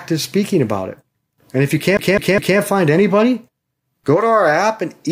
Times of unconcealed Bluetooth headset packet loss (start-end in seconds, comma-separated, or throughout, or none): none